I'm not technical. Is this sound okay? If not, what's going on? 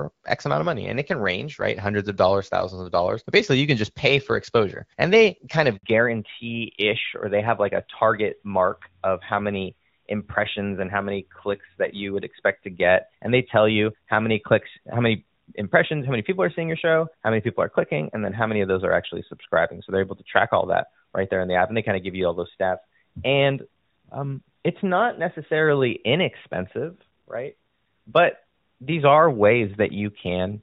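No, there are two problems, and they happen one right after the other. At 5.77 s there's a handover gap: the phone switched the call from one network to another, and for about 60 milliseconds nothing came through, so the speech simply cuts out for a split second and whatever was said in that moment is gone. It's short enough to sound like a tiny hiccup rather than a proper pause.

Right after that, from 5.83 s to the end, you get a fallback to narrowband. Up to that point the call was running in HD Voice and sounded fairly clear, with only light wear from the compression. After the switch, the call drops to an older, lower-quality phone format that throws away everything above 4 kHz. That's why the voice suddenly turns duller and a bit rougher, like an old-fashioned landline, and stays that way for the rest of the clip.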